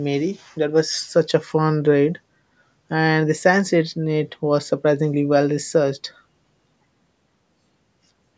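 Speech with no technical faults to report.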